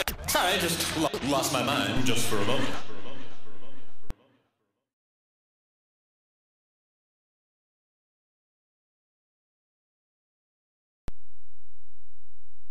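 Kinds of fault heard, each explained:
DC step: The waveform's zero line suddenly shifts, heard as a low thump. Offsets of about -22 dBFS run 1.97–4.11 s, and about -23 dBFS from 11.08 s.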